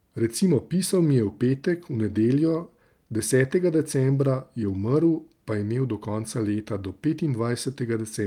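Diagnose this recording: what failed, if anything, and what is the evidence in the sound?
Nothing has failed in this recording, and no stage of the chain leaves any audible mark on the speech. No event anywhere in the sound points to trouble in the wiring, conversion, buffering, processing, transmission or playback.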